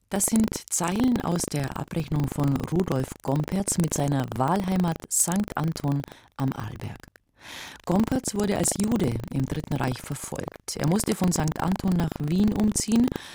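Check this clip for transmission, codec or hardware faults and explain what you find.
There is one fault, buffer tearing, running throughout. A steady robotic rattle at 25 Hz rides on the sound while signal is present. The writer and hardware reader have slipped, so a small slice of each period replays audio about a tenth of a second old, hard-joined on both sides.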